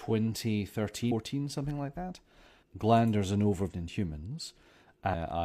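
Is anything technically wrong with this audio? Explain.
Yes. The speech has two brief glitches, at 1.07 to 1.12 s and 3.67 to 3.73 s. These are damaged data in a compressed stream: the decoder misreads corrupted frames and loses sync until it finds the next header.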